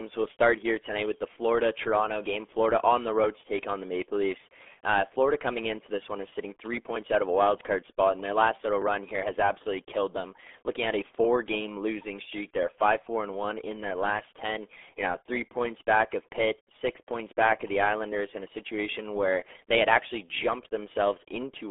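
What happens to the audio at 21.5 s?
At 21.5 s the RealAudio 14.4 codec still muffles the speech with gargly, heavy damage that fits an 8 kbit/s coder. A spectrogram shows nothing above 3.8 kHz.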